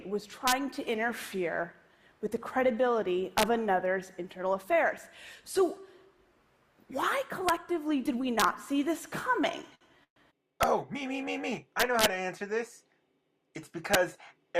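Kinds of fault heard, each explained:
Integer overflow: Loud peaks pushed about 1 to 3 dB past the limit wrap to the opposite sign. This gives sharp cracks, harsher than clipping, eight times.
Short stall from a late packet: At 9.75 s the sound is held for 61 ms while the receiver waits. It then resumes with nothing lost.
Call audio freeze: At 10.04 s the sound is stretched into a fading fill, then about 80 ms of silence, likely because delayed packets emptied the buffer.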